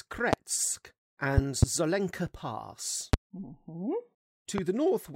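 Loud pops land at 0.33–0.36 s, 1.38–1.65 s (a double pop), 3.13–3.16 s and 4.58–4.61 s, each about 20 to 25 dB above the speech, likely voltage pulses from a plug, switch or static. Unlike a dropout, the speech continues underneath each thump.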